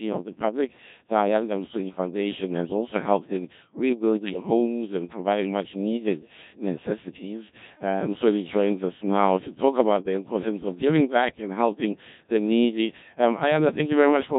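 Robotic, buzzy speech throughout, from a Codec 2 vocoder resynthesising the voice from sine waves instead of keeping the waveform, heavily degraded in a way that fits about 1.3 kbit/s.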